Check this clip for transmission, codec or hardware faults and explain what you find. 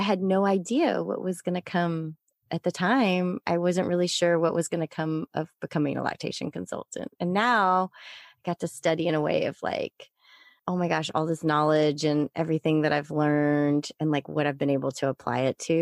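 Nothing stood out on listening to this speech recording.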